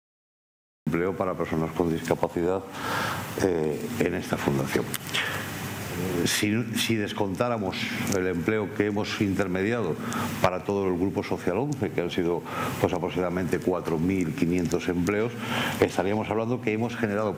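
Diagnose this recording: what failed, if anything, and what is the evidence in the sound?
Cut-off start at the capture or storage stage: recording began late, so digital silence runs to 0.87 s, then the sound enters abruptly mid-event with no natural attack.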